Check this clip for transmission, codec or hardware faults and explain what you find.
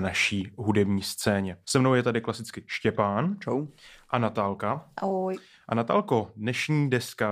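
No faults turn up anywhere in the speech. Nothing here calls for further explanation.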